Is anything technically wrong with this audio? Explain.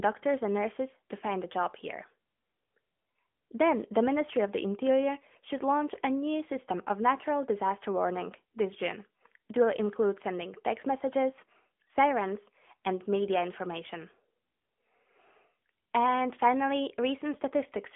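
Yes, the whole clip has been through an AMR narrowband mobile codec, and the damage is easy to hear. The speech sits in a phone-line band of roughly 200 Hz to 3.5 kHz, with nothing above 3.8 kHz, so it's thin and boxy. The codec rebuilds the voice from a vocal-tract model fed by sparse pulses every few milliseconds, and at this rate, which fits AMR-NB's 10.2 kbps mode, that comes through as a buzzy, synthetic edge on the voice.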